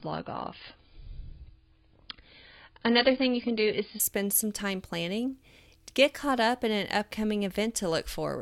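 From the start of the speech until 4.0 s, just before "spend some time planning", the audio has the sound of an adaptive stream starting at a low bitrate. Nothing reaches above about 5.4 kHz, and coding artefacts are stronger. That fits a very low-rate AAC rendition, likely near 16 kbit/s. Then the quality jumps suddenly to a 96 kbit/s rendition with no gap or stall. A network dropout would instead leave a pause, and here there is none.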